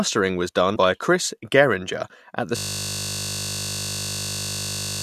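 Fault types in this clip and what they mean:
Compressed frames skipped: At about 0.75 s the speech jumps forward by roughly 50 ms, about two frames of about 23 ms each. This fits a codec that lost or rejected damaged frames. Nothing is repeated or frozen, which distinguishes it from a buffer glitch or a dropout to silence. The speech simply arrives slightly early.
System hang loop: From 2.57 s, right after "at the", the same 20 ms slice of audio repeats exactly, over a hundred times, until the clip ends. This fits the sound hardware cycling one ring buffer while the computer or driver was frozen. With such a short buffer, the repetition fuses into a steady 50 Hz buzz rather than an audible stutter. Its exact periodicity and its total replacement of the speech set it apart from mains hum.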